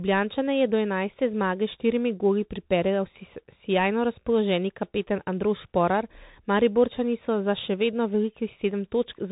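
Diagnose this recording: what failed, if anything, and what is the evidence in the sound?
The codec stage failed: the audio went through the Bluetooth CVSD headset codec, and the one-bit-per-sample delta modulation, consistent with a 64 kbps stream, can't track fast waveform changes. Throughout the speech, nothing passes above 3.8 kHz, s sounds turn scratchy, and a granular hiss persists underneath.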